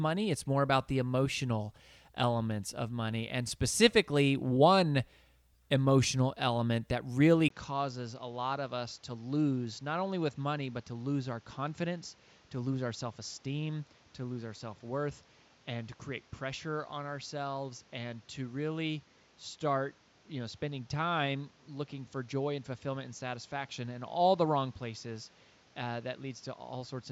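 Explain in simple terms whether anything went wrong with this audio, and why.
Yes. At about 7.48 s, right after "emotional element that really", the speech abruptly turns duller and slightly quieter, with a very brief gap at the change and a new, faint background noise from then to the end. This is most likely an input switched to a poorer device: the recording moved to a lesser microphone or headset that cuts off the highest sounds above roughly 7.6 kHz, giving the rest a muffled, narrower tone.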